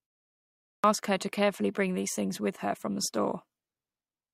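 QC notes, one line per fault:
0.74–0.84 s, clipped start after a pause: after about 0.74 s of silence at the head of the clip, the first roughly 97 ms of the following phrase never reach the output, so "her to carefully bring" begins abruptly mid-onset with its leading sounds cut away. The output device went idle during the silence and was still waking or relocking when the signal resumed, discarding audio until it came back up.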